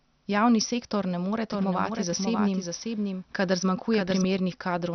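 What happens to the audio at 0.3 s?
At 0.3 s the speech is dull and gurgling, and it stays that way for the whole clip, with nothing above 6.2 kHz. Likely MP2 compression at a rate around 48 kbps: upper sub-bands switch off and the rest are coarsely quantised. Unlike a clean low-pass filter, the remaining band flickers and sounds granular.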